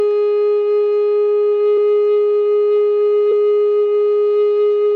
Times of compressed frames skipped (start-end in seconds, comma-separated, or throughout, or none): 1.77, 3.31